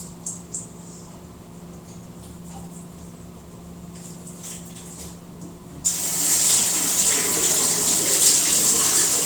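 Nothing in this recording of sounds points to a technical fault at any moment, so there's really nothing here to flag.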